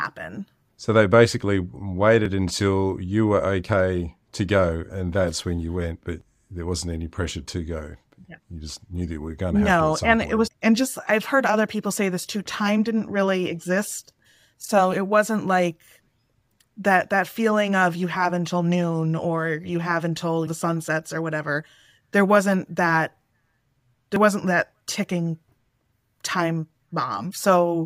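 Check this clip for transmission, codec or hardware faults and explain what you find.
One fault is present: overlap between stream segments. It occurs six times, at 2.26 s, 6.21 s, 14.19 s, 18.16 to 18.18 s, 20.17 to 20.19 s, and 24.16 s. The 14.19 s skip falls between "didn't really exist" and "so it wasn't like". Two segments claimed the same stretch of time. The player trimmed the overlap, discarding real speech. Each time, about 8 to 26 ms vanishes. The waveform jumps, giving a small click or skip. The positions sit on a 2-second grid, which fits 2-second stream segments.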